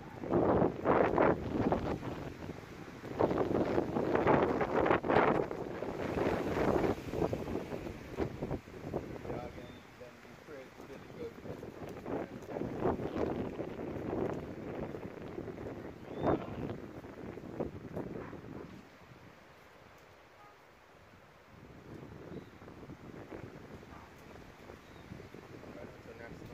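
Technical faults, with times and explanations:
No technical faults detected.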